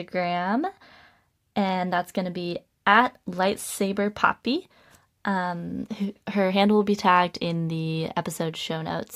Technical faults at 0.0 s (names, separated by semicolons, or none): none